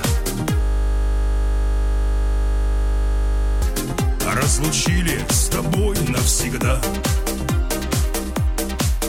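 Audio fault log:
0.62–3.62 s, system hang loop: A 20 ms slice of audio repeats exactly at 50 Hz, giving a steady buzz. The system froze while the buffer kept cycling, losing about three seconds.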